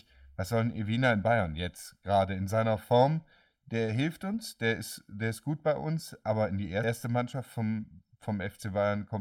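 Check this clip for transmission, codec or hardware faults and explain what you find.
Two faults are present: a channel delay affecting the whole clip and one short burst of damaged compressed data.

Throughout the speech, one channel arrives roughly 1.5 ms behind the other before the two are summed to mono, causing channel delay (comb filtering). Content shared by both channels cancels at regularly spaced frequencies, with the first deep notch somewhere around 400 Hz and further notches stacked evenly above it. The result is a hollow, phasey coloration that stays fixed for the full length.

At 6.83 s, a stretch of damaged data in the compressed stream makes the decoder misread the frame there and lose sync, forcing it to hunt for the next valid header. That brief failure comes through as a sharp blip or chirp cutting into the speech.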